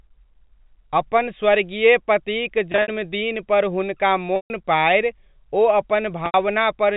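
Packet loss with pitch repetition occurs three times. At 2.72 to 2.88 s, about 100 ms of speech is lost in scattered gaps, the longest 60 ms. At 4.36 to 4.50 s, 140 ms drops out. At 6.26 to 6.34 s, 80 ms goes. The receiver fills each gap by repeating the last pitch period, so the speech briefly holds on a buzzy tone. Over longer losses, the repeat fades toward silence before the speech cross-fades back. The narrow G.711 telephone band stays steady throughout.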